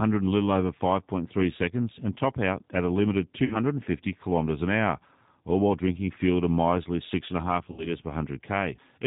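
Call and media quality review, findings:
G.729 codec, throughout. Narrowband, nothing above 4 kHz; rough, slightly synthetic texture on all speech, consistent with 8 kbit/s G.729A. Each 10 ms frame is rebuilt from a vocal tract filter, a pitch predictor and a few pulses, so fine waveform detail is lost. Codec damage plainly audible. Probable component: codec negotiation on the call leg.

VoIP packet loss concealed by the speech codec, 3.45 to 3.58 s and 7.72 to 7.93 s. About 60 ms of audio missing each time, which fits two lost 30 ms packets. The decoder extrapolates from its last pitch and filter at falling gain, producing a brief, fading concealment sound. Speech stays weak or distorted after packets resume, to about 3.58 s and 7.93 s, because each frame depends on the previous one. Probable component: network path or jitter buffer.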